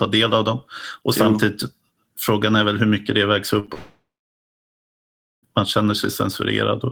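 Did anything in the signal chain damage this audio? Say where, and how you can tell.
Yes. At 3.59 s to 3.66 s and again at 3.66 s to 3.70 s the speech briefly smears and wobbles. That is short concealed packet loss in the network stage: about 40 ms and then 20 ms of packets arrived too late, and the decoder bridged each gap by extending the preceding sound.

From 3.74 s the sound trails off into a fading buzz, then near-silence lasting about 1.4 s. It resumes at 5.45 s with roughly 1.7 s of speech gone. This is likely a long network dropout, where concealment ran out and nothing arrived to replace it.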